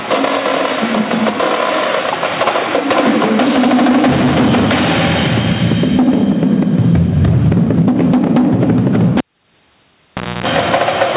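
Gain pumping runs through the whole audio: loud and soft parts end up closer in level, a swing of about 20 dB, so everything sounds squashed. That's likely the gain cranked way too high with a fast limiter clamping down on the peaks. Then at 9.18 s you get a cable pulled and plugged in. There's a pop, about 1.24 s of near silence, a roughly 0.27 s burst of 60 Hz mains buzz while only the tip is touching, and another pop as the signal comes back at 10.46 s. Over all of it, the call path tops out at 4 kHz, which fits a G.711 A-law link at 64 kbps.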